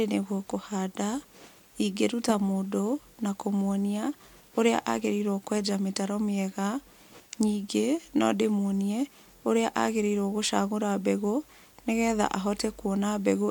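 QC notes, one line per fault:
Nothing stood out on listening to this speech.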